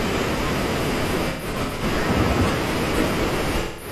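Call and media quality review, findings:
AAC frame loss with concealment, 1.29–1.83 s: intermittent smeared, phasey patches in the speech. About 0.3 s of audio is lost in bursts over 512 ms, longest around 150 ms, which fits roughly seven dropped frames. The decoder repeats the last good spectrum.

AAC frame loss with concealment, 3.59–3.91 s: about 213 ms lost, which fits roughly five frames. It runs to the clip's end.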